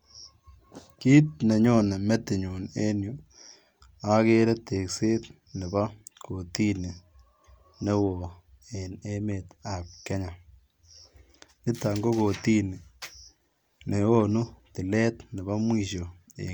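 Nothing in this speech recording stands out as a technical problem, so there's nothing here to flag.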